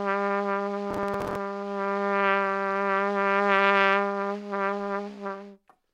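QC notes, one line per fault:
0.91–1.36 s, processor overload crackle: for almost half a second a gritty, tearing crackle rides on the sound and then stops cleanly. The processing repeatedly failed to deliver its small buffers in time, and each late slot was filled with a stale fragment of earlier audio, joined with hard edges. The grain is fine, which fits buffers of about 5 ms, with roughly twenty misses. A sustained burst like this separates it from a single dropout click.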